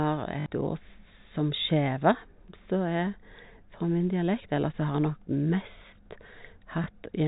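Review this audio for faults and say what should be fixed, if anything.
There are two spots of packet loss with the last packet repeated in this speech. At 0.40 to 0.46 s, a 60 ms stretch is filled by replaying the same chunk. That fits three lost 20 ms packets, and it gives a brief buzzy, robotic stutter. At 6.84 to 6.86 s, a single 20 ms repeat produces a shorter tick. The G.711 telephone band sits underneath. To prevent this, enable proper packet loss concealment and a jitter buffer instead of plain packet repetition.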